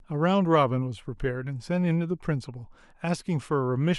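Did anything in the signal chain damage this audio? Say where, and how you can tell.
No, nothing in this speech recording stood out on listening as damage from any stage of the chain.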